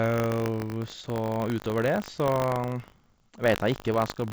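Throughout the speech there is buffer tearing. The writer and the hardware reader of the ring buffer have slipped and cross every period. A small slice of each buffer, about 2 percent, replays audio roughly 70 ms old between hard joins. That gives a steady rattling buzz at 50 Hz, present whenever sound plays. The rate fits a 20 ms buffer period. The call path itself cuts everything above 8 kHz, consistent with a wideband codec such as G.722.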